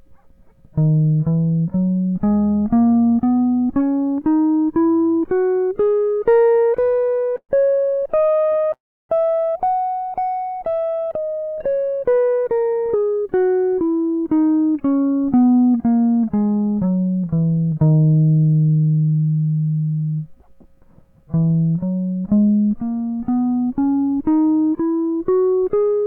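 From 6.77 to 8.71 s the music stutters in repeated stalls. Packets arrived late or too slowly, so the jitter buffer kept running dry: 28 short gaps totalling 471 ms were filled by extending the preceding sound, the longest 116 ms. About a quarter of that stretch is concealment, and the playback drags.

At 8.73 s a call audio freeze follows, lasting until 9.11 s. The sound is held briefly and then drops to silence for most of the 360 ms, before the music resumes where it stopped. The likely cause is packets held up in transit, emptying the buffer.

A jitter buffer speed-up runs from 11.67 to 13.50 s. Roughly 0.3 s of surplus buffered audio is trimmed in many small pitch-period cuts, so the music plays at about 115% speed with unchanged pitch and the tempo visibly rushes. A second speed-up, 24.95 to 25.93 s, removes roughly 0.15 s at about 114%.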